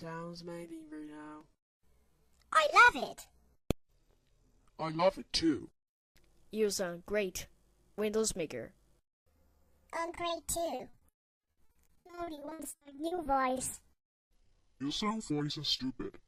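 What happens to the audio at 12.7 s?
At 12.7 s the audio is inside a stretch of repeated packet loss (robotic sound) running from about 10.75 to 13.27 s. Data keeps arriving late or not at all, and each hole is patched by stretching out the last received sound. Those patches, each no longer than 60 ms, cover about 40% of the stretch, leaving choppy, robotic audio with pieces missing. A single dropout leaves one isolated gap, whereas here the gaps follow one another closely throughout the span.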